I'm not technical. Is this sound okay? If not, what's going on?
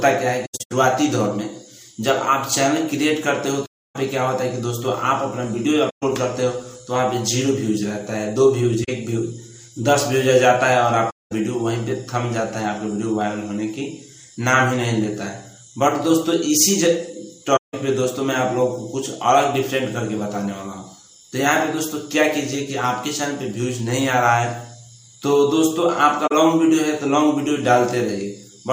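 No. The sound briefly drops out at 0.45, 3.65, 5.89, 8.84, 11.10, 17.56 and 26.27 seconds. That's AAC frame loss with muting: chunks of compressed audio went missing, and the player softly faded into silence and back.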